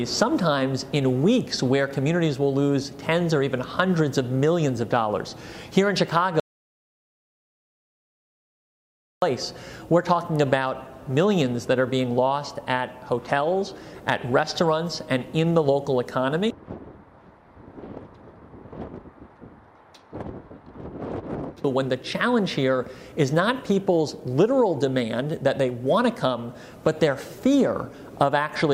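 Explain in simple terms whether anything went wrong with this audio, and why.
Something went wrong once. The input feeding the recorder was likely lost for a moment, through a device disconnecting, a link failing or an accidental mute, while recording carried on and filled the gap with nothing. The result is an audio dropout to silence from 6.40 to 9.22 seconds: the sound stops abruptly, leaves about 2.8 seconds of total silence with no background hiss at all, then returns mid-flow. Whatever happened during that gap is missing.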